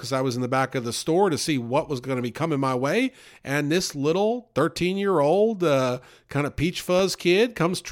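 A background task stalling the USB bus or audio driver once every 1.02 s causes periodic USB or driver dropouts in this speech recording between 3.93 and 6.99 s. Each stall drops well under a millisecond of audio and leaves a tiny gap of silence, so about four evenly spaced dropouts occur, heard as ticks only where they fall on speech.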